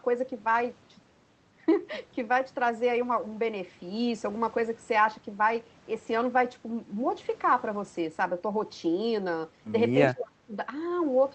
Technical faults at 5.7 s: none

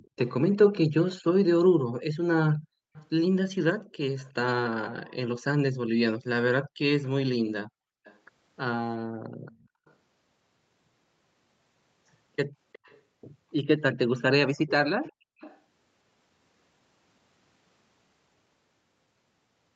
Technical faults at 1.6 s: echo leak

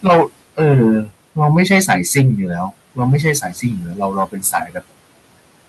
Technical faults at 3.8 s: hard clipping; noise suppressor artifacts; speech cut by the noise suppressor

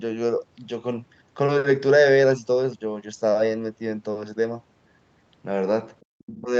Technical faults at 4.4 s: none

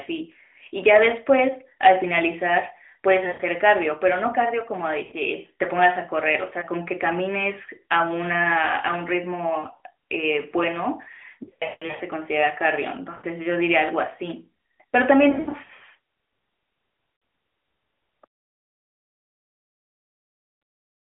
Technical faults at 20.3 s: none

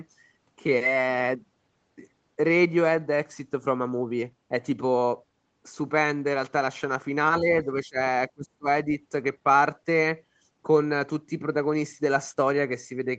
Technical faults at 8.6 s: speech suppressed in double talk

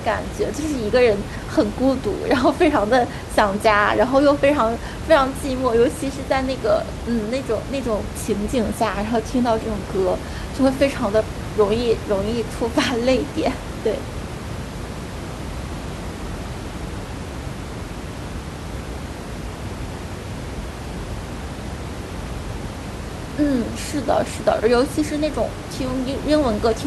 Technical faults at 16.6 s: none

